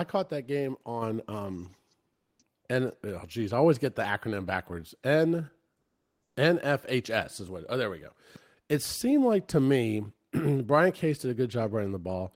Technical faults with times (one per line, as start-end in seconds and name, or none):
1.02 microphone volume stepped up
2.13-2.39 comfort noise in place of the background